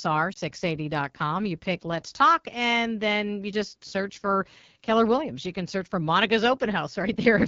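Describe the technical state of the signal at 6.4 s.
At 6.4 s the speech sounds rough and raspy, as it does throughout, with a hiss-like top band. That is AMR wideband (HD Voice) codec damage: a coarse pulse-driven model of the vocal tract up to 6.4 kHz, shaped noise above it, which fits the 8.85 kbit/s rate.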